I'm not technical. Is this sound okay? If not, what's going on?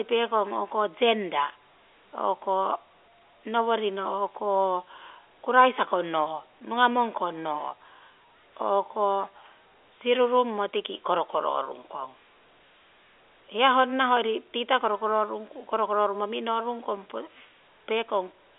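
Yes, there are no faults: this is speech over a standard telephone line using G.711 telephone coding, so nothing above 3.8 kHz gets through and the sound is narrower than in person, which is normal for a phone call.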